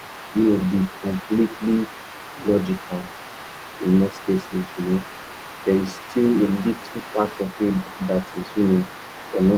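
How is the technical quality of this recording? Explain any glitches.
The recording has one fault, present throughout. From 0.0 to 9.57 s, the other side's voice leaks through: a second, fainter voice runs under the main speech at a level roughly 20 dB below it. The likely cause is incomplete echo cancellation. The talker's device plays the far end on a loudspeaker, the microphone picks that playback up, and the canceller fails to subtract it fully. The residue stays quiet.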